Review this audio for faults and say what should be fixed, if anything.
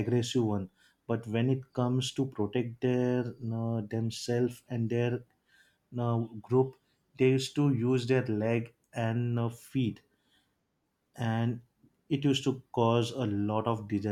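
No faults found; nothing needs fixing.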